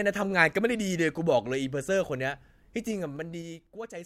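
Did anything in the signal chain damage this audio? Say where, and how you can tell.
Yes. Zipper noise appears from 2.79 to 3.99 s, in a gain stage in processing. The level falls by about 15 dB in 3 dB jumps, around four a second, each leaving a small click. The steps are unsmoothed, so the fade ticks instead of gliding.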